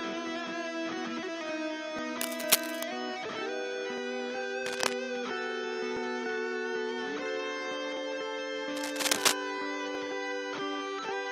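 A small click or skip lands at 1.99 s, where the waveform jumps because a few milliseconds of sound have gone missing. The same tiny skip returns at 3.98, 5.97, 7.97 and 9.95 s, every 2 seconds. This is overlap between stream segments: the timestamps of neighbouring 2-second segments overlap, and the player trims that overlap from sound that was never actually doubled.

From 2.21 to 2.83 s, a dense, uneven scratching and rustling sits over the audio, slightly louder than the audio itself. It returns from 4.63 to 4.94 s at about the same level as the audio, and again from 8.77 to 9.33 s, once more slightly above it. This is cable scratch noise, likely from a worn cable, connector or control being moved so that its contact resistance changes rapidly.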